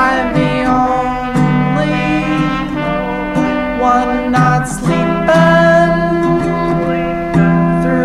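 No technical faults are audible anywhere in this music recording.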